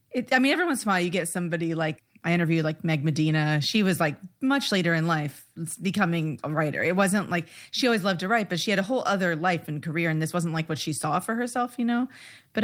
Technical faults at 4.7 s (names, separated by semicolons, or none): none